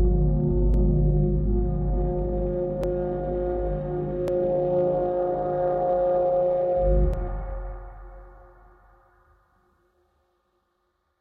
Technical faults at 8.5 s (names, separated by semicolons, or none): none